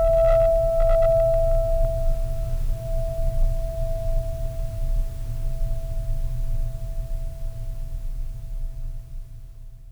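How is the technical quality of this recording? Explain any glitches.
The music has two bursts of hard clipping. From 0.05 to 1.85 s, peaks overdriven by about 5 dB are sliced flat, adding high harmonics heard as harsh fuzz; a milder 2 dB overload at 3.43 to 3.45 s gives a brief crackle.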